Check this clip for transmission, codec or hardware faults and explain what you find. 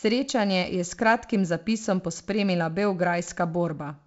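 No transmission, codec or hardware faults can be heard in the speech. It is carried by G.722 wideband telephone coding, which at 56 kbit/s leaves nothing above about 7.7 kHz and a light layer of coding hiss.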